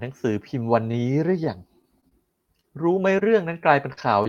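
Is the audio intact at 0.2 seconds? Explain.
Yes, the audio is intact at 0.2 seconds, with no fault at that moment.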